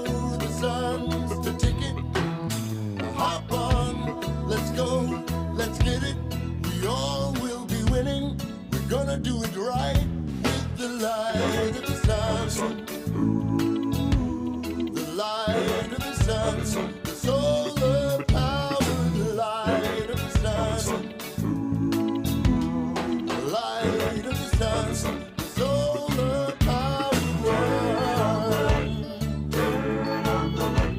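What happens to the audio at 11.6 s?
At 11.6 s, CD scratch ticks, six evenly spaced, the longest about a millisecond, from 11.03 to 11.79 s. Their regularity, one per disc turn, distinguishes them from random clicks.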